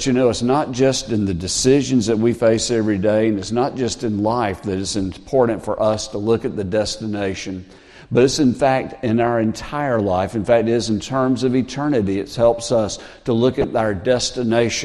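From the start the whole clip sounds dull and plainly gurgling. The top end keeps thinning out, and what remains has a coarse, granular edge. This is MP2 compression damage, likely from encoding at a low rate, which fits about 80 kbps. Too few bits force upper sub-bands off and leave the rest roughly quantised.

From 13.61 to 13.64 s there is a brief burst of DAB burbling. It is a short disturbance over the sound. Bit errors, at a small rate, slipped past error correction into a few audio frames. Wrong samples then put short blips of noise into single sub-bands.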